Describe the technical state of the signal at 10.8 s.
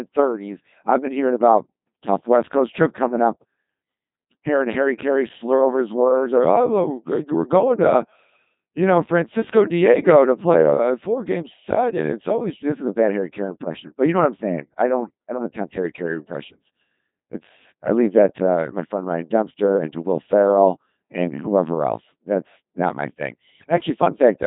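At 10.8 s, as throughout, the speech carries heavy Codec 2 vocoder damage. It is rebuilt from pitch and envelope parameters, so it sounds buzzy and robotic, with nothing above 3.8 kHz, which fits a 2.4 kbit/s mode.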